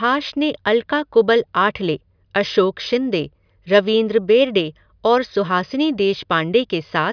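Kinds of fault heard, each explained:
Nothing to flag here: no technical faults turn up anywhere in the speech.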